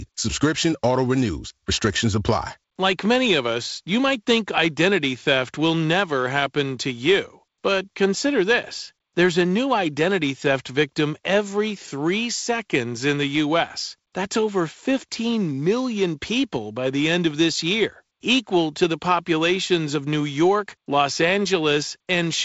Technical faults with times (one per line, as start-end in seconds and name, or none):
none